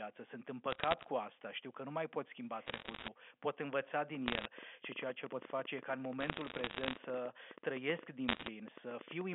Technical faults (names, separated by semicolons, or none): bit errors on a digital phone line; train of clicks